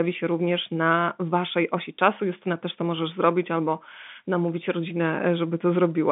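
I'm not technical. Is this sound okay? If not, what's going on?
Yes, it's fine: ordinary telephone-quality speech, nothing wrong.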